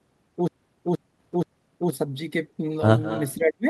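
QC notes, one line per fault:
3.03–3.34 s, echo leak: a faint delayed copy of the speech trails it by 203 ms, about 15 dB quieter, likely from a far-end loudspeaker whose echo canceller let some pickup through. On a spectrogram, the same harmonic pattern repeats, shifted right and dimmer.
3.35–3.66 s, speech suppressed in double talk: the speech drops steeply, by around 40 dB at worst, over roughly 300 ms, likely because the echo canceller mistook overlapping talk for echo and attenuated everything. The waveform pinches down sharply and the spectrogram goes nearly blank.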